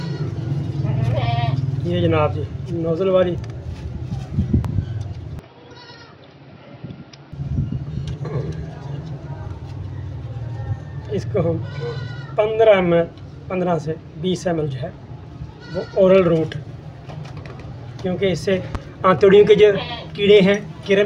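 The audio carries two loud pops and a brief stretch where the input switched to a poorer device. The first pop, at 4.65–4.67 s, stands a few dB above the signal. The second, at 18.75–18.77 s, is stronger at about 10 dB. Each is a single short thump with the sound continuing underneath, most likely a voltage pulse from a plug, switch or static. The pulse shape and the uninterrupted sound beneath it set these apart from dropouts or digital clicks. From 5.39 to 7.32 s the tone turns dull and boxy, with nothing above 5.8 kHz. A new background noise sits roughly 40 dB below the signal. There is no silence at the switch and no real level change. That fresh noise floor, arriving together with the lost top end, likely marks a change of input device rather than simple filtering.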